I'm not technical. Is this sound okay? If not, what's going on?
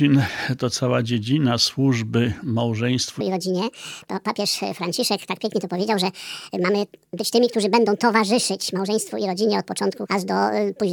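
No. From about 3.21 s right to the end, there's a section at the wrong speed. Everything suddenly plays about 1.66 times faster than it should, and because speed and pitch move together, it also jumps up by a bit under an octave, so it sounds high and hurried, a bit chipmunk-like. The likely cause is that this stretch was played back or edited against the wrong clock.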